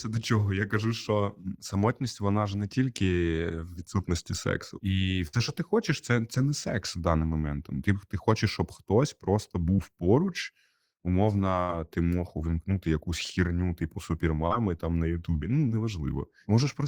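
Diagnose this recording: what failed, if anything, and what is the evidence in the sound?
A burst of packet loss on the network leg appears at 5.27–5.35 s, after "відсутності сексу і", and at 11.62–11.71 s, before "ти мог увімкнути якусь". About 60 ms went missing each time. The receiver continued the last sound and faded it out. A spectrogram shows a frozen, decaying continuation, then an abrupt resumption.

Short concealed packet loss, also in the network path, occurs at 9.74–9.80 s, at 14.47–14.53 s between "увімкнути якусь хірню типу" and "там на", and at 15.69–15.72 s. Gaps of 20–40 ms were bridged by extrapolation, leaving brief smears. A spectrogram shows short, overly smooth patches, and the waveform shows slight seams where the fill crossfades back.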